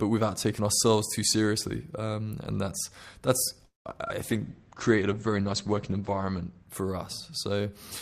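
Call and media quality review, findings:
Call audio freeze, 3.65 to 3.87 s, just after "and that's that's": sound stretches into a fading buzz, then about 150 ms of silence before resuming where it stopped. Nothing lost, just a gap of about 200 ms. Jitter buffer; likely delayed packets draining it empty.

Short concealed packet loss, 4.05 to 4.08 s and 4.08 to 4.11 s, back to back: brief smear and wobble as the decoder extrapolates the preceding sound, then crossfades back. About 20 ms of real audio missing at each, so a short consonant may drop out.

Call bitrate drop, 4.23 to 6.74 s: speech turns rough, watery and muffled, with top end gone above 8 kHz instead of reaching 20 kHz. Fits the bandwidth estimate collapsing and Opus being pushed from about 64 to 12 kbps for roughly 2.4 s before recovering.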